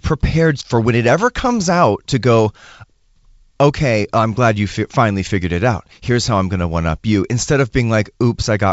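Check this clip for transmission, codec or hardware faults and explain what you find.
No faults found.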